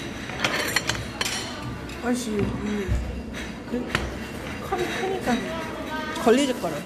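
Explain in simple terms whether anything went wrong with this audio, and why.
Two short problems come from corrupt frames that were concealed, at 2.96 to 3.03 s and 5.35 to 5.41 s. Damaged data was hidden by the decoder.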